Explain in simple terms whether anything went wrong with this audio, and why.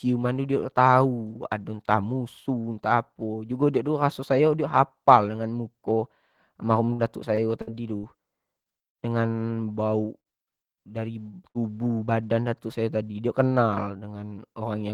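Between 6.85 and 8.06 seconds the speech turns choppy and robotic. This is repeated packet loss: the audio travels in small chunks, and five times in a row chunks went missing. Each time the receiver covered the hole by stretching the last bit of sound, only for the next hole to arrive moments later. About a fifth of that stretch is patched-over sound, and roughly 0.12 seconds of real speech is simply gone. What marks it out is the rapid string of gaps, none longer than about 60 ms, which gives the robotic, stuttering quality.

Three single dropouts follow, at 8.88 s, 10.20 s and 11.49 s. Each is a burst of packet loss: one hole of about 60 ms where the last sound is held briefly as a buzz or fading hiss, then the speech jumps ahead with that piece missing. The one at 10.20 s runs to about 0.17 s and carries a little extra filler. Unlike the robotic stretch, each is an isolated hiccup rather than a chain of them.

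At 10.50–10.55 s there is a short stall from a late packet. A chunk arrived late, so the receiver held the previous sound for about 20 ms until it came, then carried on from exactly where it stopped. You hear a slight drag or dip, but unlike a burst, nothing is skipped.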